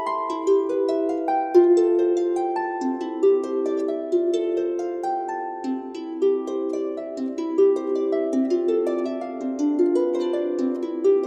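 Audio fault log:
Nothing stood out on listening.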